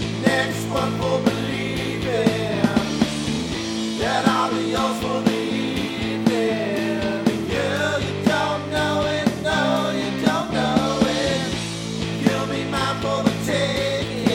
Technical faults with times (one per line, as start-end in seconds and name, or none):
none